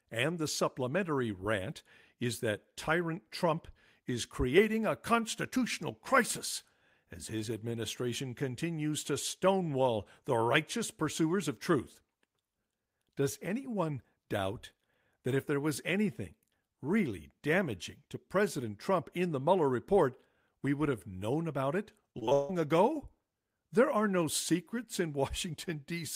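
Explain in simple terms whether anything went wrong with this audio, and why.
Near the end of the clip, from about 22.11 to 22.51 s, the speech turns choppy and robotic, with small bits missing. That's repeated packet loss (robotic sound). Chunks of the audio failed to arrive over a network several times in quick succession, the longest gap lasting about 158 ms. Each time, the system stretched the last bit of sound to fill the hole, and that stretched filler covers roughly two-thirds of this brief stretch.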